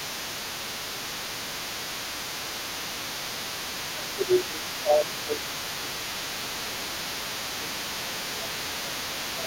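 Right from the start and all the way through, you can hear the other side's voice leaking through underneath the talker, sitting roughly 10 dB below the main speech. It's most likely a loudspeaker-to-microphone echo that the echo canceller never fully removed, so the far end's audio gets picked up and sent straight back.

On top of that there's speech suppressed in double talk. First a brief, mild dip at 1.2 s, only a few decibels and gone in a blink. Then it gets serious: from 3.92 to 6.15 s, again at 6.38 to 6.5 s and 6.66 to 6.85 s, and from 7.09 s to the end, the talker's voice ducks by around 10 dB. The likely culprit is the canceller failing to tell both voices apart while they overlap, so it turns everything down, leaving the talker sounding pushed back.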